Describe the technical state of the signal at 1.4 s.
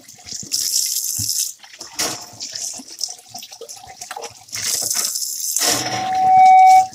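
No fault is audible at 1.4 s; the sound there comes through intact.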